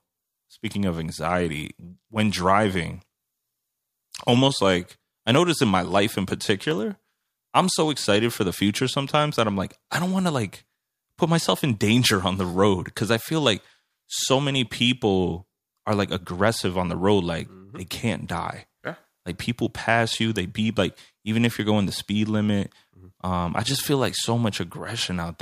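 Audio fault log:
5.92 to 8.57 s, CD scratch ticks: Eleven ticks sound after "I notice in my" and stop before "sometimes that I'm like", about four a second. The longest lasts a few milliseconds. A disc blemish overwhelms error correction once per turn, so the player patches or mutes those samples.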